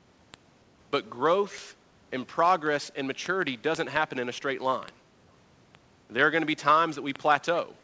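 From 0.12 s to the end, the speech carries word clock ticks at a steady rate of roughly one every 50 ms. The receiving device ran on its own clock, a few hundred parts per million off the sender's, so each time the two drifted a sample apart, one sample was dropped or repeated. Unlike random clicks or packet dropouts, these sharp ticks keep a regular pulse while their strength varies, under a band-limited call sound that stops at 8 kHz.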